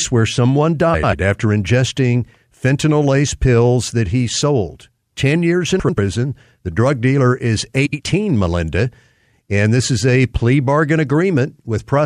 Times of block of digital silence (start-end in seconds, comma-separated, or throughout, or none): none